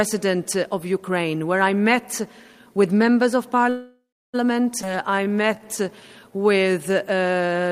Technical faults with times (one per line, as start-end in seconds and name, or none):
3.69-4.36 call audio freeze
4.82-4.85 skip ahead
4.85-6.32 jitter buffer slow-down